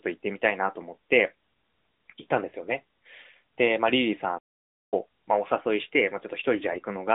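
Playback stall, 4.38 to 4.94 s: the speech cuts out mid-flow and the line goes silent for about 0.54 s before resuming. The likely cause is the player running out of buffered data, or its output thread being blocked, so nothing reached the output until it recovered. Because the gap is a clean, unexpected silence rather than a dropout with noise, it sounds like the talker froze momentarily and then carried on.

AMR bit errors, 6.58 to 6.80 s: over this stretch the speech keeps roughly its pitch and loudness but turns hoarse, scratchy and gargly. On a weak radio link, a few percent of the lightly protected bits in each frame arrived flipped while the checksum on the critical bits still passed, so the decoder accepted bad data. The excitation pulses landed in the wrong places and the fine pitch, gain and spectral values drifted, smearing the voice. The damaged span fits about eleven 20 ms frames. 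All of this sits on an AMR narrowband mobile codec path running at 12.2 kbps with a 200 to 3700 Hz band.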